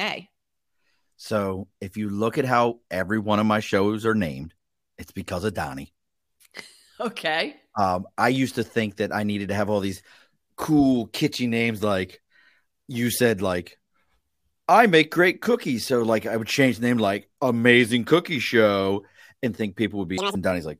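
Speech, with a short stretch of audio read two samples at a time (double speed) from 20.18 to 20.35 s, right after "and think". Samples are being taken in pairs as single frames, so this segment plays twice as fast and an octave higher. A spectrogram shows harmonics and formants jumping to double frequency and squeezed in time.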